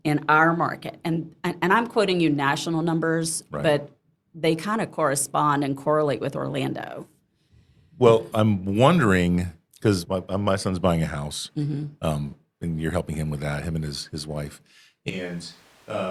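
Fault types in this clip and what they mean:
Switch to a distant microphone: from 15.1 s the speech turns abruptly roomy and thin, about 10 dB quieter and noisier, likely picked up farther away.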